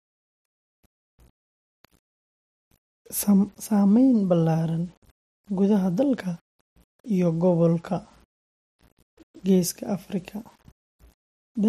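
Low bit depth without dither runs throughout the speech, with grainy distortion that tracks the voice and sits roughly 40 dB below it. The likely cause is undithered rounding to 8 bits, so the error follows the signal, roughening quiet syllables.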